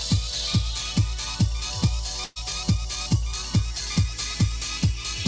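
The audio has come through a call path, with nothing above 8 kHz, which fits G.722 at 64 kbps. From 2.24 to 2.38 s a burst of packet loss leaves about 120 ms of sound missing. The receiver fills roughly 118 ms by extending and fading the last sound. A spectrogram shows smeared, dimming bands there, and the waveform shows a repetitive tapering stretch before the audio jumps ahead.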